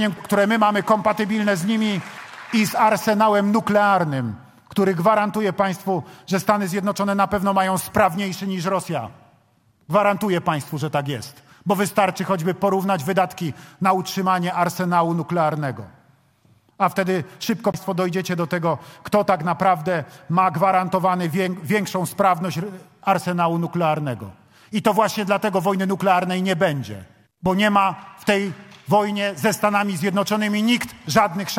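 At about 17.72 s there's a CD skip: a tiny tick, a very short dropout of roughly 20 ms, and then the audio picks up from a slightly different spot than where it left off. What's happened is the laser lost its track, maybe from a knock or a flaw on the disc, and landed on another turn of the spiral. The player mutes for that instant while it relocks, so you hear the discontinuity as a quick click plus a jump.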